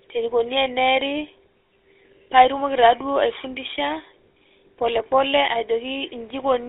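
Speech, carried throughout over a GSM full-rate codec. The band runs only from 300 Hz to 3.6 kHz. The codec rebuilds the voice from a vocal-tract model driven by sparse pulses. That leaves a plainly audible buzzy, gravelly roughness, which fits a 13 kbps stream.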